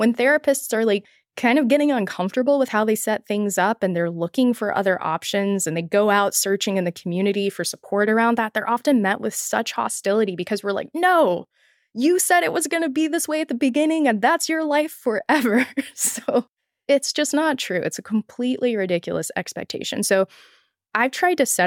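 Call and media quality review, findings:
No audible faults found in this speech recording.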